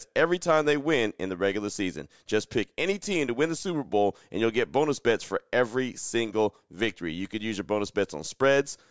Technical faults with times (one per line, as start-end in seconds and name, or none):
none